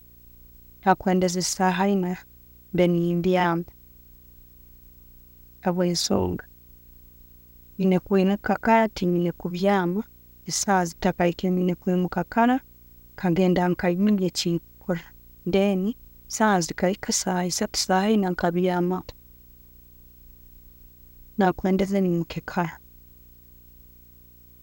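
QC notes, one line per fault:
Throughout, video or display buzz: a steady buzz sits under the speech at 59.94 Hz, the field rate of an NTSC-style picture, with harsh hash riding on top of it. A thin, very high tone at 15.7 kHz, the line rate, runs alongside. Both stay roughly 30 dB below the speech. A screen or video cable is coupling its scanning signals into the audio path, so the picture's timing becomes audible.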